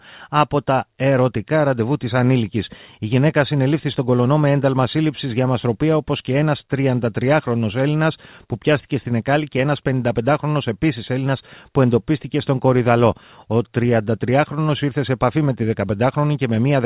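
Nothing goes wrong anywhere in this bit of speech, and what you're hearing is just ordinary A-law G.711 telephone coding doing its usual narrowband job.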